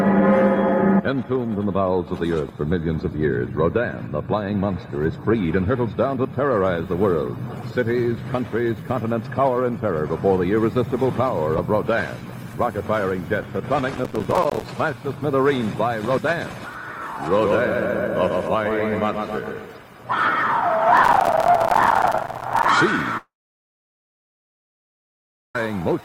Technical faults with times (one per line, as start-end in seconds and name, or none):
13.95-14.65 processor overload crackle
20.97-22.69 processor overload crackle
23.17-25.55 long network dropout